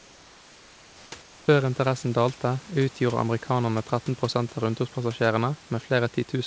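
From 0.00 to 1.12 s and again from 1.22 to 1.48 s, the room background gives way to comfort noise: a smooth, featureless hiss about 3 dB, then about 4 dB, quieter, likely from discontinuous transmission in the call path. Unlike a gate's dead silence, the pause stays filled.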